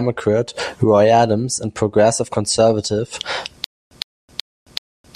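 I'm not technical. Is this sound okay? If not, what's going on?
No. From about 3.64 s to the end, the speech turns into a stutter with silent gaps: a short 109 ms scrap repeats four times, each followed by about 270 ms of dead silence. The player likely stalled and kept replaying its last fragment.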